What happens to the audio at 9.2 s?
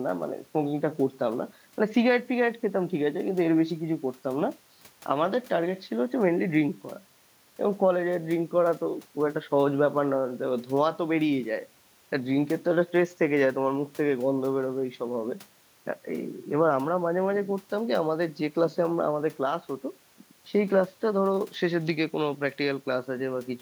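Nothing goes wrong at 9.2 s; the speech there runs through intact, with no dropout, click, distortion or other fault.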